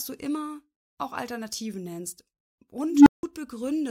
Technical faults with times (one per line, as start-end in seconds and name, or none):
2.87-3.23 unstable filter